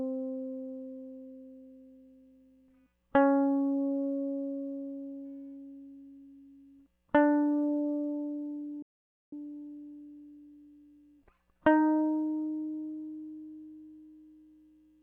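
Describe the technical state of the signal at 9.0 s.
A playback stall runs from 8.82 to 9.33 s, so at 9.0 s the music has dropped to silence partway through, for roughly half a second. The cause is likely the player running short of buffered data, or its output thread being blocked, leaving nothing to send to the output until it caught up. The music then carries on again at 9.33 s, after a gap that sounds like a sudden mid-flow freeze.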